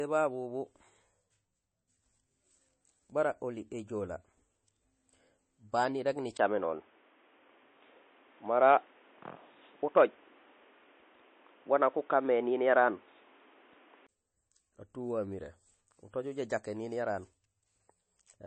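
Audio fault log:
Throughout: MP3 compression. Nothing is heard above 8.3 kHz, so the sound is dull at the top. Watery, swirling artefacts are plainly audible. This is likely from an encoder short of bits. It cuts the treble at a fixed frequency and drops weak frequency lines, and those lines flicker on and off from frame to frame. The harshness of the damage fits a low bitrate of about 32 kbps.
6.37 to 14.09 s: input switched to a poorer device. A 20 ms gap of silence marks the change at 6.37 s. From there the sound turns boxy and narrow, with nothing above 3.7 kHz. Its level shifts by a few decibels. A new background noise appears, roughly 35 dB below the signal. This points likely to a change to another microphone or a headset's call mode. At 14.09 s the fuller sound returns.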